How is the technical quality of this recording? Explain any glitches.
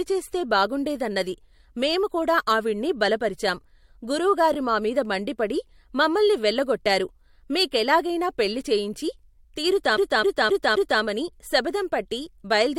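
The recording has one clear glitch, a CD stuck on one turn, from 9.97 to 11.02 s. A scratch knocks the laser back one track each revolution, so the same 0.26 s of speech repeats four times, each jump marked by a brief mute. Unlike an echo or smeared dropout, the repeats are identical, evenly spaced and hard-edged.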